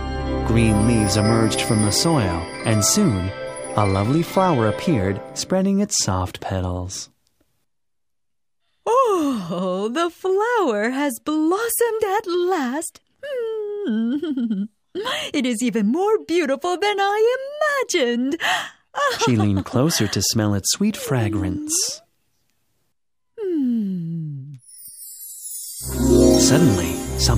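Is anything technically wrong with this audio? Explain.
No, nothing technically wrong turns up on a full listen.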